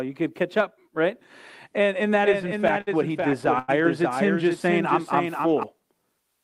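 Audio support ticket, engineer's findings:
Doubled audio track, 2.22 to 5.63 s: full-band second copy of the speech about half a second behind, about 5 dB quieter, dry, abrupt start and stop. Likely a slower second capture path or an edit holding two misaligned copies.

Repeated stalls (stutter), 2.33 to 3.70 s: 12 jitter-buffer underruns from late or slow packet delivery. Last sound held over each gap, 249 ms in total, about 18% of the span, longest 94 ms. Nothing lost; delivery drags and stutters.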